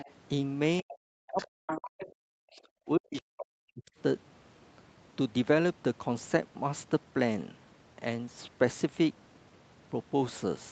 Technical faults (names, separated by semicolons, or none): other side's voice leaking through; speech suppressed in double talk